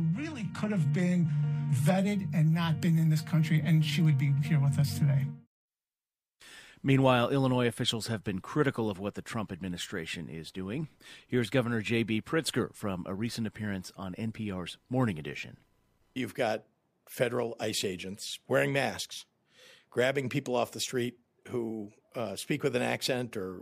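From 0 to 2.0 s the audio plays as an adaptive stream starting at a low bitrate. The player began on a cheap rendition to start quickly, then stepped up once it had measured the connection. At first the treble sounds thin and synthetic, with smeared, watery codec artefacts, which points to roughly HE-AAC at 16 kbit/s. At 2.0 s the sound abruptly sharpens with no gap, which fits AAC-LC at 96 kbit/s. On a spectrogram, the first two seconds show patchy, replicated high bands, then the texture changes sharply, with nothing above 12.3 kHz.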